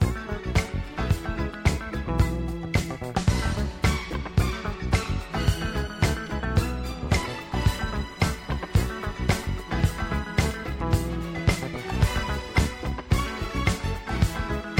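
No technical faults can be heard anywhere in this audio. Nothing in the sound points to a problem in how it was captured or delivered.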